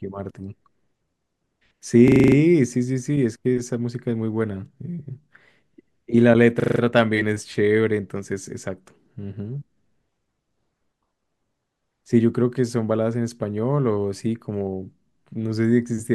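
At 2.08 s the speech catches in a system hang loop until 2.36 s. The driver stalls while the sound hardware keeps replaying the same 40 ms of ring buffer, seven times over, giving a rattling 25 Hz stutter. It happens again from 6.6 to 6.8 s, five repeats of the same 40 ms loop. Both times the speech picks up right where it froze, with next to nothing missing.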